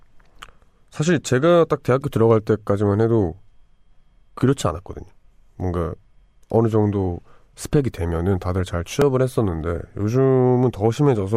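At 9.02 s a tiny click, almost a brief buzz, cuts into the speech. It is a repeated buffer: new audio arrived late, so a piece of about 1.33 ms, which fits a 64-sample buffer, played three times in a row with hard joins, losing essentially nothing.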